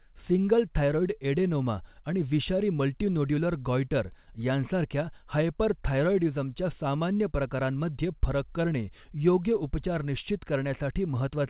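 Speech, with no technical faults to report.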